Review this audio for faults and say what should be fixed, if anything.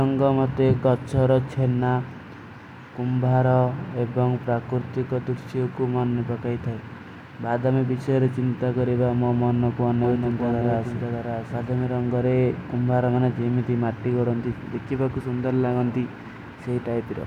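From 10.04 to 11.84 s a doubled audio track appears: a second full-band copy of the speech trails by about 0.7 s, roughly 5 dB quieter, likely from a slower duplicate capture path. Unlike an echo, it has no decay or room colour and starts and stops abruptly. Route each source through a single capture path.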